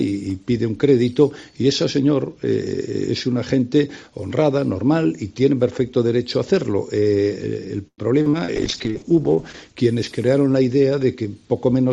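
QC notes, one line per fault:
7.87–8.51 s, repeated packet loss (robotic sound): four gaps arrive in quick succession, the longest about 105 ms. The receiver patched them by extending the last sound for 207 ms in total, about 32% of the span, while 120 ms is simply missing. The repeated extensions give the choppy, mechanical quality. On a spectrogram, the patched stretches show as flat, repeated stripes, broken up by holes. On the waveform, near-identical cycles repeat across each patch.
8.57–9.82 s, call bitrate drop: the encoder's budget falls from 96 kbps to 8 kbps and stays at the lowest rate for about 1.18 s. At that rate the coding becomes coarse and the audio band shrinks from 20 kHz to 8 kHz, so the sound turns rough and muffled. A spectrogram shows a hard ceiling at 8 kHz, with nothing above it and blotchy texture below.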